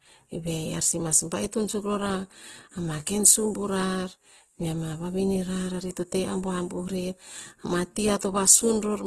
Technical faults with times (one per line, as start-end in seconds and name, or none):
0.00-9.07 Opus compression
8.19 pre-echo